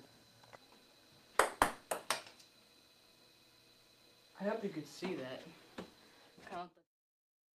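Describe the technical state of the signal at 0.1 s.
At 0.1 s the signal is intact, with no audible fault.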